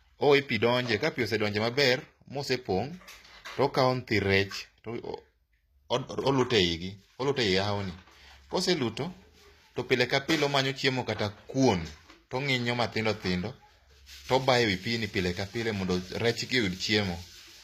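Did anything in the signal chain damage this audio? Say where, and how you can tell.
Yes. The damage sits at the codec stage, and it runs through the whole speech clip. The s sounds are gritty and metallic. Nothing reaches above about 14.9 kHz. Both point to HE-AAC compression, likely at a low rate of around 24 kbps. Such a codec keeps only the lower spectrum and fills the top by spectral band replication. Copied bands don't line up with the real harmonics, so sibilants lose their clean edge.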